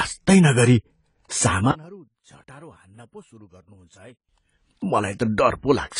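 Speech that sounds dull and smeared throughout, with a warbling, fizzy edge on sibilants and nothing above about 10 kHz, which points to AAC compression, likely AAC-LC at a low rate around 24 kbps quantising away detail and lowering the cut-off. From 1.71 to 4.29 s the voice nearly vanishes, dropping by about 27 dB to a faint residue. This fits one channel inverted: with one stereo side's polarity likely reversed, the centred voice cancels when the channels sum to mono.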